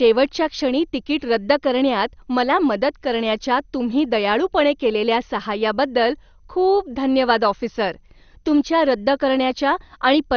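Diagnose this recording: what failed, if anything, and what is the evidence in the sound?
The fault sits at the codec stage and runs through the whole speech recording. The sound is dull, with nothing above about 6.5 kHz, and a gurgling, granular distortion is plainly audible on every phrase. This is likely MP2 compression at a low rate, consistent with roughly 48 kbps. Layer II divides the spectrum into 32 equal sub-bands and rations bits among them. Starved of bits, it shuts off the upper bands entirely and coarsely quantises the rest, which produces this muffled, burbling texture.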